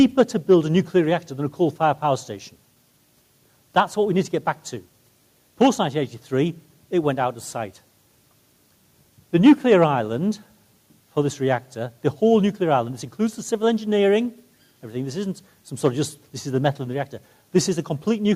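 No technical faults can be heard anywhere in it.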